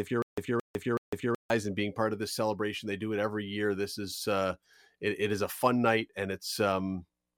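A stutter with silent gaps runs through this speech clip from 0.0 s, already under way, to 1.5 s, just before "and being part of". A 223 ms burst repeats three times, every 375 ms, with 152 ms of silence between. This likely comes from a stalled stream replaying its last fragment, and the audio meant for that span is lost.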